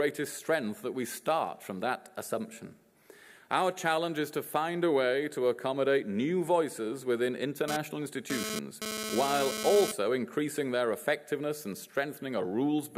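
From 7.68 to 9.92 s a GSM phone buzz cuts in, about 5 dB below the wanted sound: a nearby 2G handset's radio bursts, repeating at 217 Hz, are rectified by the audio circuitry. Unlike smooth mains hum, it is a harsh, harmonic-rich rasp that stops and starts.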